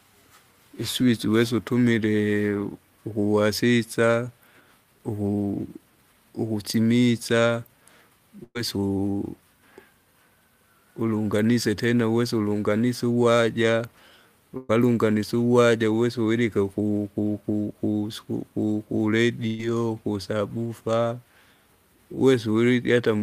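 A speech recording with three bursts of packet loss, at 8.43 to 8.57 s, 14.57 to 14.71 s and 19.47 to 19.61 s. Each time roughly 120 ms of audio never arrives, and the receiver fills the gap by stretching the last received sound into a held, fading buzz or hiss. In the first burst that fill runs out after 115 ms, leaving about 20 ms of silence. On a spectrogram each gap shows as a smeared, flat continuation of the last sound that dims and then cuts abruptly to the resumed speech.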